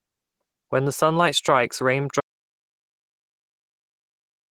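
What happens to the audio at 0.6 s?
At 0.6 s you're hearing Opus compression, which runs through the whole clip rather than just that moment. The speech sounds hoarse, a bit muffled and grainy, and the damage is plainly audible. That fits a speech-oriented hybrid mode squeezed down to roughly 16 kbps. The encoder doesn't have the bits for the fine spectral detail, so it fills bands with approximations and noise, roughening the tone. The likely culprit is a low-rate Opus encode.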